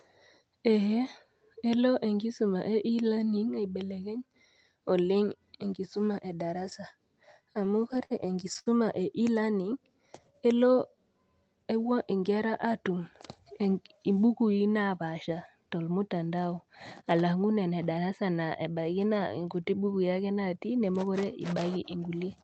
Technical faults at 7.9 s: repeated stalls (stutter)

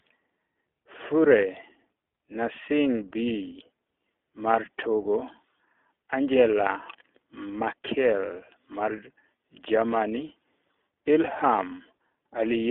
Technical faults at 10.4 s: iLBC codec

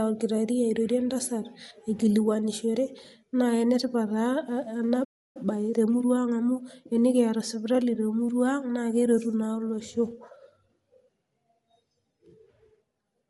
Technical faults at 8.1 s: Bluetooth LC3 compression

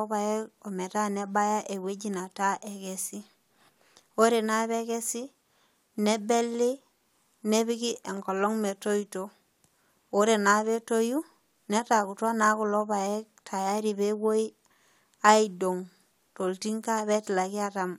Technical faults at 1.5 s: none

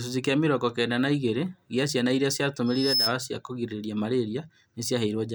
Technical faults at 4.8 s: none

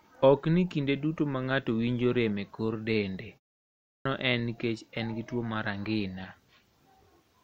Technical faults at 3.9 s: clipped start after a pause

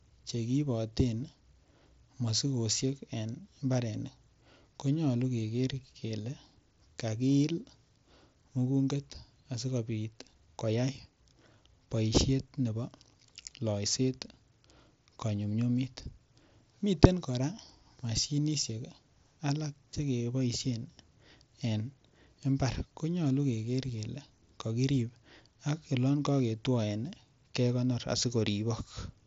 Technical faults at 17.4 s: none

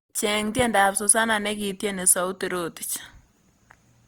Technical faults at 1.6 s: low-bitrate audio saved at a high bitrate

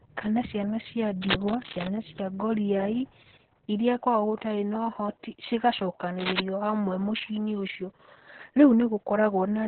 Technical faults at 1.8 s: Opus voice compression; cable scratch noise

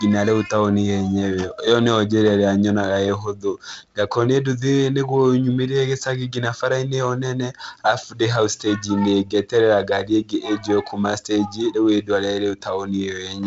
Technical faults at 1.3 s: none

